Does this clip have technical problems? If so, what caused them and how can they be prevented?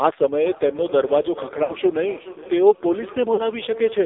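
Yes. The speech has passed through the AMR narrowband mobile codec, with heavy damage throughout. The band runs only from 300 Hz to 3.7 kHz. The voice sounds buzzy and synthetic, which points to a very low bitrate, around 6 kbps. A wideband codec or a better signal would prevent it.

Feedback echo between two devices starts at 0.41 s and lasts to the end. Each phrase returns roughly every 0.4 s, thinner and ringing. At its loudest it sits about 16 dB below the speech. A second device in the room replays the call, and the first microphone picks it up. Muting or leaving the call on the second device prevents this.

Lost AMR speech frames cause two short breaks. The first runs from 1.64 to 1.73 s and lasts 60 ms. The second runs from 3.34 to 3.42 s and lasts 40 ms. The sound smears and dips while the decoder repeats its last good settings at falling gain. That fits three and then two dropped 20 ms frames, likely from radio errors. 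A stronger radio connection prevents them.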